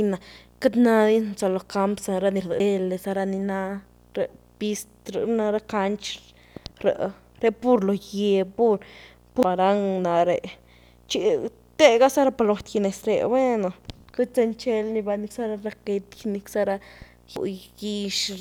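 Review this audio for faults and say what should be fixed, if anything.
A video or display buzz runs through the whole clip: a screen or video cable is coupling into the audio path, adding a 60 Hz field-rate buzz with hash above it, sitting roughly 35 dB below the speech. On a spectrogram it appears as a steady 60 Hz line with harmonics and faint broadband hash. Reroute audio cabling away from monitors and video leads, and ground the display and audio gear to a common point.

Damaged data in a compressed stream produces brief glitches at 2.60 s, 9.43 s and 17.36 s. Corrupted bytes make the decoder misread frames and lose sync until it finds the next frame header. Each appears as a short disruption on a spectrogram and a discontinuity in the waveform. Use checksummed transfer or storage and re-fetch the file from an intact source.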